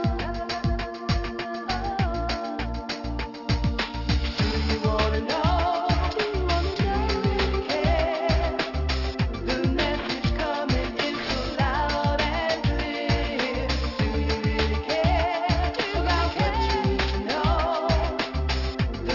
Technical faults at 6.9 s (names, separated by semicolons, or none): aliasing